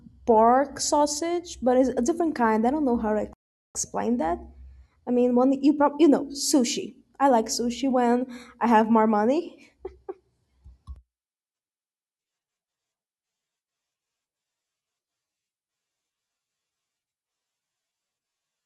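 At 3.33 s the player's buffer ran dry and playback halted until more data arrived, a rebuffering stall. The speech drops to silence until 3.75 s, then resumes exactly where it stopped, so nothing is lost but about 0.42 s is added.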